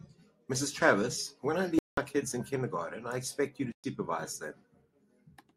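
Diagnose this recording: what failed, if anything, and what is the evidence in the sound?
The wireless link to the listening device most likely failed to deliver audio packets in time, a Bluetooth dropout at the playback stage. The speech cuts to silence from 1.79 to 1.98 s (a gap of 186 ms) and again from 3.72 to 3.84 s (116 ms). Each time it resumes further along, as if it had kept playing through the hole. The gap lengths fit eight and five missing packets, dropped and not resent.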